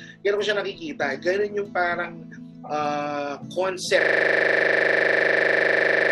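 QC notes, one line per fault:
4.01 to end: system hang loop. The system froze and the hardware kept replaying one 40 ms buffer, about 53 times, giving a rigid 25 Hz buzz. The waveform shows identical repeating blocks; the spectrogram shows fixed vertical stripes and a 25 Hz harmonic comb.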